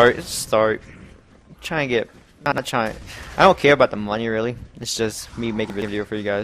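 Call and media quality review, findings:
Chunks out of order, 2.46 to 2.58 s: one 60 ms chunk delivered a chunk late, likely in jitter buffer or write path. It plays after its successor, so the audio jumbles briefly, with three hard joins.

Chunks out of order, 5.7 to 5.88 s: 60 ms chunk arrives two chunks late and plays after both following chunks. The 180 ms span sounds garbled, with three hard joins. Nothing is dropped.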